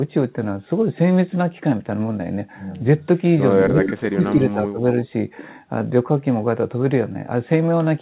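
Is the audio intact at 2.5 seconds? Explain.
Yes, at 2.5 seconds the speech is intact, with no dropout, glitch or other fault at that moment.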